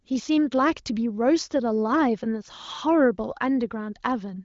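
There are no technical faults to describe in time order in this speech clip.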